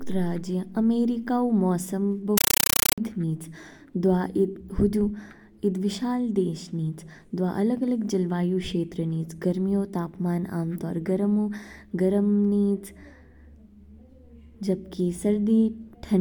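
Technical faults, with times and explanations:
2.38 to 2.98 s, compressed stream played as audio: just after "राज्य अमेरिका ऊ मौसम", the speech gives way to very loud, chattering static. An encoded bitstream went out as if it were ordinary PCM samples, so each compressed frame plays as an 8 ms burst of noise followed by silent padding. These bursts repeat 31.25 times a second, which fits an AC-3 stream at 384 kbps, and that steady pulse gives the static its buzzing, chattering texture.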